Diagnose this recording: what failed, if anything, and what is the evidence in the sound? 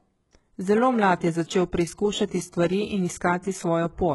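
Throughout the speech, the sibilants sound gritty and metallic, with a lisping edge. The treble feels pasted on rather than continuous with the body of the sound, and nothing is present above about 11.5 kHz. The stage is the codec: this is likely HE-AAC compression at a very low rate, consistent with about 12 kbps. The upper band is rebuilt from copied lower bands, so its harmonics fail to align with the real ones.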